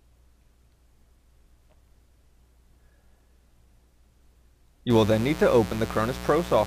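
Mains buzz from 4.90 s to the end at 6.66 s: sharp switching spikes twice per 60 Hz cycle spray harmonics into the kilohertz range, a raspy buzz about 15 dB under the sound.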